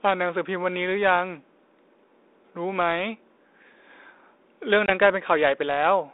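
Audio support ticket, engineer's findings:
Packet loss on an ADPCM call, 4.86 to 4.90 s. Hard-edged dropout of about 20 ms, roughly one packet, filled with silence. Component: G.726 decoder on a 32 kbit/s link, band-limited to 300 Hz to 3.7 kHz. Mechanism: the missing packet leaves the decoder's adaptive predictor and step size out of step with the sender's, so the sound after the hole must resettle as the two states resynchronise.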